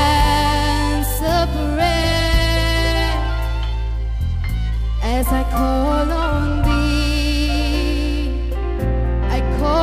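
Periodic clock jitter runs the whole way through: the converter clock wobbles at around 1 kHz, adding sidebands that give a rough, metallic edge that drops out in silences.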